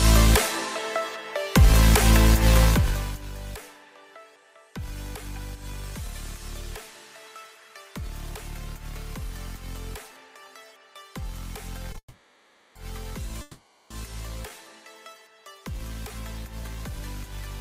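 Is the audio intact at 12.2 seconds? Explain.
No. A call audio freeze runs from 11.98 to 12.76 s: the last sound is stretched into a fading buzz ending in about 70 ms of silence, likely because delayed packets emptied the jitter buffer. Playback then resumes where it stopped, about 0.77 s later, with nothing lost.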